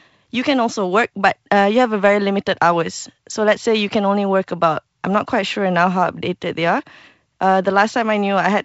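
No faults can be heard.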